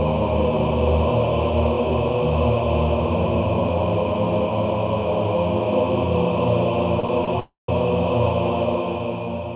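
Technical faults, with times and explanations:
7.00 s and 7.25 s, short stalls from a late packet: each time the sound hangs on its most recent fragment a little too long, about 32 ms at 7.00 s and 30 ms at 7.25 s, then picks up exactly where it left off with nothing skipped. The jitter buffer ran dry waiting for a packet, so the receiver stretched what it had. On a spectrogram, the band-limited content, which stops at 4 kHz as expected over a telephone-grade call path, briefly smears into flat horizontal streaks. The waveform shows a short stretch of repeated cycles with a faint dip in level.
7.39 to 7.70 s, call audio freeze: for about 290 ms the sound stops moving forward. At first the last fragment carries on as a fading buzzy tail, then it drops to silence for about 150 ms before the audio resumes from the same point, so time has been inserted rather than lost. This is likely packets stalling in transit until the jitter buffer emptied and concealment gave out. 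On the spectrogram, the frequency pattern turns into smooth horizontal bands that fade into an empty gap. The waveform shows a shrinking, repetitive tail followed by a flat line.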